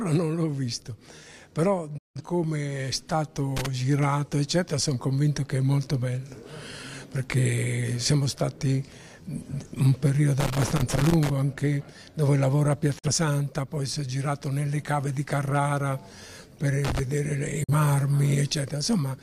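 Digital broadcast dropout at 1.98 to 2.21 s: the receiver stops getting valid frames and mutes, fading down in about 8 ms into a hole of roughly 170 ms, which fits four lost frames. The audio resumes afterward, but what was transmitted during the gap is gone. Loose connector crackle follows at 3.57 to 3.66 s, a short irregular burst of scratchy crackle. A worn or dirty contact is rapidly making and breaking, chopping the signal into fragments.

The crackle returns at 10.40 to 11.30 s as a longer, nearly one-second spell of ragged scratching while the contact keeps shifting. A second digital broadcast dropout at 12.98 to 13.08 s is a briefer mute of about 43 ms, consistent with a single failed frame, again entered through an 8 ms fade. Loose connector crackle recurs at 16.85 to 17.00 s. A last single-frame dropout of about 43 ms follows at 17.64 to 17.74 s.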